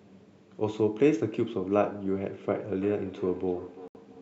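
From 2.47 s to the end, feedback echo between two devices: a second device replays the sound, which re-enters the microphone and returns roughly every 0.3 s, peaking at about -17 dB. At 3.88 s the sound cuts out for about 80 ms and resumes as if it had continued. The likely cause is a Bluetooth dropout in which late packets were discarded, consistent with roughly three lost frames. The band ends at 8 kHz from the call microphone processing.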